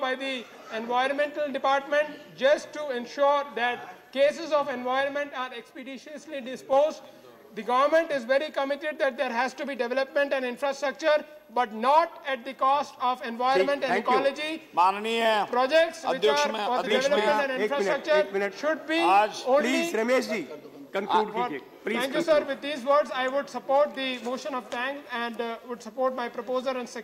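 At 5.01 s the level drops by about 4 dB in a single step and stays down until 6.73 s, a sudden gain jump, likely from a gain setting applied without a ramp. Sound and background noise fall together, and the waveform shows a flat-edged, step-shaped dip in envelope.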